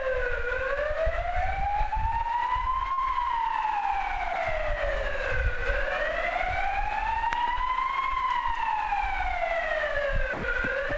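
At 2.92 to 2.99 s there is a burst of packet loss. Audio failed to arrive in time, and the receiver filled about 55 ms by extending the last sound and fading it, so the ongoing sound turns into a brief, decaying hiss or buzz. Playback then picks up further on, having skipped about 60 ms, so the event jumps slightly forward. The G.722 call path limits everything to below 8 kHz, so the concealment fill carries no top end either.

Three short dropouts follow, each likely caused by the sender's voice detector, which judged the sound to be background and stopped transmitting. At 4.33 to 4.35 s, 10.33 to 10.43 s and 10.89 to 10.91 s the sound is replaced by flat comfort noise for 20 ms, 100 ms and 20 ms respectively, then returns.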